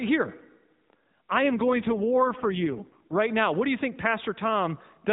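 An AMR rate drop runs from 1.44 s to 3.20 s. Over a narrowband mobile link that already cuts everything above 4 kHz, the codec falls to a much lower rate, which fits a step down from 12.2 to 4.75 kbps, with the freed bits going to error protection. The band stays the same and there is no gap, but the speech turns buzzier and more synthetic until the rate recovers at 3.20 s.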